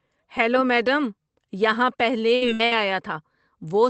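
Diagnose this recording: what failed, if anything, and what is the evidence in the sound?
The network stage is where this one goes wrong: a burst of packet loss, hitting three times in quick succession at 2.35–2.44 s, 2.53–2.62 s and 2.65–2.74 s. In each gap the receiver covers about 60 ms by carrying the last bit of speech forward and fading it into a held buzz or hiss. Then it jumps ahead, so roughly 60 ms of speech never arrives at all. The call codec's band tops out around 8 kHz.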